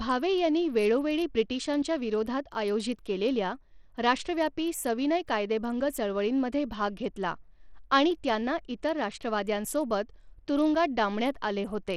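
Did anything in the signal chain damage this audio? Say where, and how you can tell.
Yes. Across the whole speech clip the top end sounds thin and unstable, with treble that thins out and flickers, and a gritty grain riding on the voice, all plainly audible. The damage is at the codec stage, likely Bluetooth SBC compression at a starved setting, which fits a bitrate around 80 kbps. SBC splits the signal into a few wide sub-bands with crude bit allocation, so the weak upper bands get almost no bits, and coarse quantisation leaves grit and aliasing behind.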